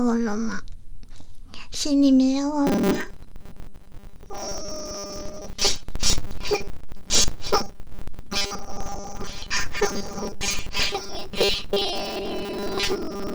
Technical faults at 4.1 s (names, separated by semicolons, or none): robotic sound from repeated short buffers